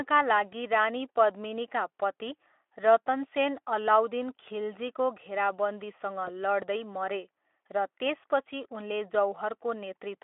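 At 6.25 to 6.29 s the speech briefly smears into a stretched sound as VoIP packet loss concealed by the speech codec takes over. One 20 ms frame went missing, and the Speex decoder extrapolated its last pitch and filter, fading the result rather than leaving the silent gap a plain dropout would.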